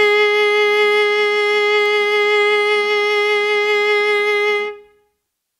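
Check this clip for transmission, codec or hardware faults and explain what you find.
Two bit error spikes occur in this music clip, at 0.74 s and 1.86 s. Each is a single corrupted sample, peaking at about -21 dBFS and about -14 dBFS respectively: a flipped bit jumps the value by a power of two before it snaps back, producing a brief broadband tick unrelated to the music.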